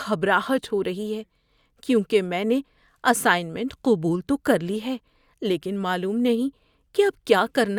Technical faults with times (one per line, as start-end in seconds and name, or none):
none